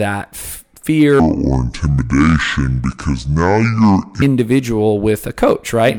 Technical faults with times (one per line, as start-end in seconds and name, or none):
1.20-4.22 section at the wrong speed